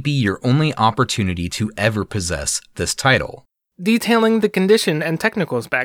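Speech recording with no audible technical fault at any point: the signal holds steady throughout, with nothing in its level, timing or continuity that departs from what the recording should be.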